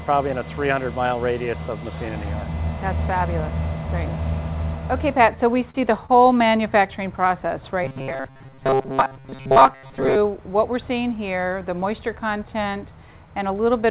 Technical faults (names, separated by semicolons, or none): short stall from a late packet; robotic sound from repeated short buffers